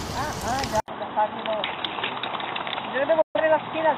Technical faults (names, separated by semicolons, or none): input switched to a poorer device; digital broadcast dropout